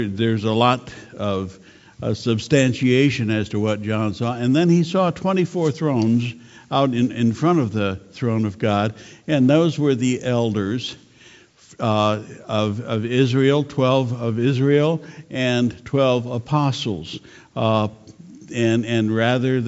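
Nothing in this one catches the ear as a technical problem; the sound just runs along without anything going wrong.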